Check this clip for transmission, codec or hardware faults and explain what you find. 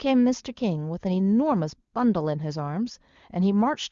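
No transmission, codec or hardware faults are audible in this speech, and the wideband HD Voice coding sounds consistent with one of its higher rates rather than the rough, raspy lowest modes.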